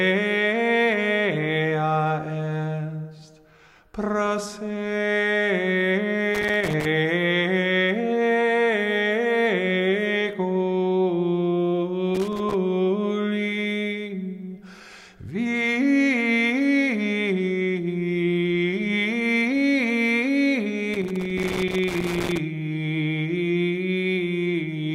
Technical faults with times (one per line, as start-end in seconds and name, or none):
6.35-6.86 loose connector crackle
12.15-12.54 loose connector crackle
20.94-22.39 loose connector crackle